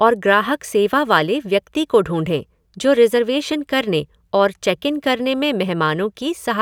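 Speech recording; no technical faults are audible anywhere.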